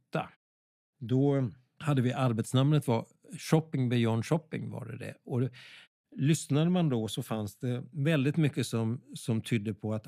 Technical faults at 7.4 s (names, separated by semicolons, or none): none